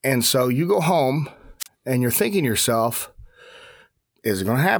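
Just after "so you go home", from 1.60 to 1.67 s, hiss briefly swells and the sound then cuts to near silence for about 33 ms before "and you're thinking to". This is a wireless microphone squelch dropout: the FM radio signal faded until the receiver's squelch muted its output.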